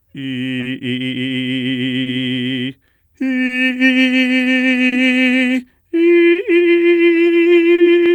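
Throughout the music, clock drift between sender and receiver, with the sender running roughly 2% slow, keeps draining the buffer, so tiny repeated slivers cause uneven timing hiccups rather than evenly spaced ones.

At 0.60, 2.03, 3.46, 4.89, 6.32 and 7.75 s, a short stall from a late packet holds the sound for about 30 ms, then resumes where it left off. Nothing is lost, unlike a dropout gap.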